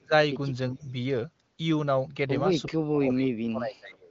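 From 0.01 to 0.13 s the speech is pushed down by around 25 dB, and from 0.72 to 0.96 s it dips more gently, by roughly 10 dB. Both are speech suppressed in double talk, likely caused by an echo canceller that misread overlapping talk as echo and turned everything down. On a waveform these show as sudden pinches in the envelope. On a spectrogram the energy fades across the band, which here reaches up to about 7.5 kHz through the HD Voice path.

Between 0.79 and 0.91 s there is an echo leak, likely caused by a loudspeaker echo canceller that did not fully cancel what its microphone picked up. A faint copy of the voice returns 356 ms late at around 30 dB below the speech. On a spectrogram it is a dim, shifted repeat of the earlier speech pattern.

From 2.69 to 4.1 s the suppression returns much harder, reaching about 35 dB down across roughly one and a half seconds. The speech sinks. On the waveform this is a long, collapsed stretch, and on the spectrogram the harmonics thin out and largely vanish.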